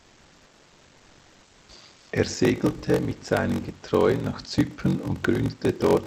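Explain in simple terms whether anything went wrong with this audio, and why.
Two things went wrong in this speech.

Throughout the clip there is a block size mismatch (padded). One stage hands over audio in pieces shorter than the next stage expects, which fits a 1024-sample read, and the leftover space in each piece is filled with silence. Those tiny silent gaps repeat about 47 times a second, giving a steady low buzz, and the speech runs slower, at about 0.86 times normal speed. The pitch stays normal, which rules out a simple slowed-down recording. A slowed-down recording would also sound deeper.

From the start to 1.69 s, and again from 1.97 to 2.11 s, there is comfort noise in place of the background. During these pauses the real room sound is swapped for a smooth, even hiss at nearly the same loudness. The likely cause is the sender going quiet when nobody is talking, leaving the receiver to fill the gap with artificial noise. 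A noise gate would leave silence there instead.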